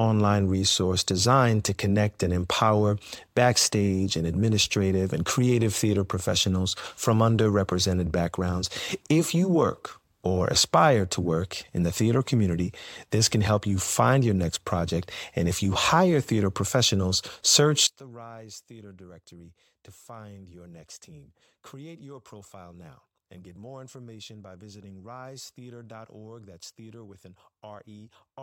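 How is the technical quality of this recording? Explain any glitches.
There's one real glitch here. From 17.87 s onward the speech drops about 22 dB, likely one channel inverted, so centred content cancels when summed to mono.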